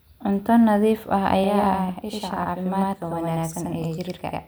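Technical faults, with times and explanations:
1.44–4.48 s: channel delay (doubling). One channel runs 93 ms late, which fits a 4096-sample buffer. Summed to mono, the speech carries an equal-level slap echo.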